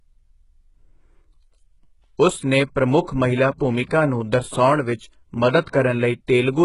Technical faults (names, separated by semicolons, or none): HE-AAC compression; pre-echo